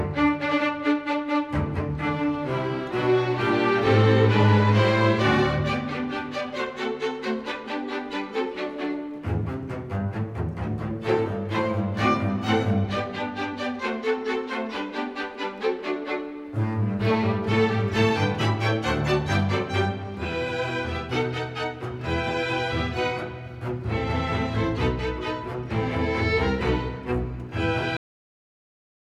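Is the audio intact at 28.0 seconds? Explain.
No. At 27.97 s the sound stops abruptly mid-event and drops straight to digital silence with no decay, lasting to the end at 29.13 s. This is a cut-off end: the final buffers were never written or played back.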